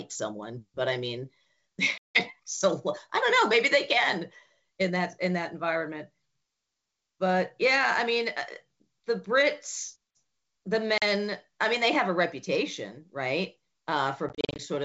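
Packet loss on an ADPCM call cuts hard-edged gaps into the speech at 1.98 to 2.20 s (about 170 ms missing), at 10.98 to 11.03 s (40 ms), and from 14.29 to 14.61 s, where 170 ms is lost in short runs of up to 40 ms scattered over 300 ms. Silence fills each hole, and the decoder's predictor and step size drift from the sender's, so speech resumes with brief, slight distortion. The wideband G.722 sound around the gaps stays clear.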